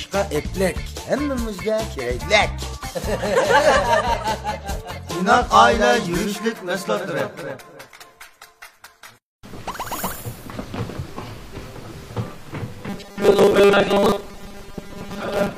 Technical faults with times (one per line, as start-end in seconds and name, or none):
12.89-15.58 robotic sound from repeated short buffers